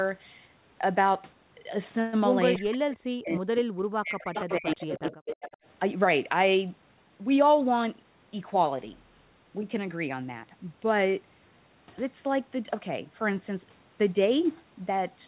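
At 2.53 to 2.59 s a brief echo leak appears: a scrap of the far side's sound returns 316 ms late, about 15 dB below the main speech, likely because a loudspeaker-side canceller let it through. It shows as a faint, offset copy of earlier spectral patterns.

From 2.56 to 3.57 s and 3.88 to 4.37 s, speech is suppressed in double talk. The canceller likely mistook overlapping talk for echo, so the speech drops by up to about 40 dB. The waveform collapses and spectrogram energy thins or vanishes.

The echo leak returns at 4.34 to 4.76 s and 4.92 to 5.57 s, now about 10 dB down and still 316 ms late. It is heard as a delayed copy.

Suppression strikes again from 4.57 to 5.28 s, with the same deep gaps interleaved with the echo.

Throughout, the G.711 mu-law call path leaves nothing above 4 kHz, a hard ceiling on the spectrogram.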